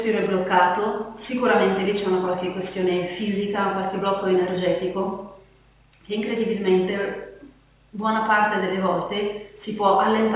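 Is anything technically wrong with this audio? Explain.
No, nothing is technically wrong; the audio sits within the band of a telephone-grade call codec, with nothing above about 4 kHz, as that path should deliver.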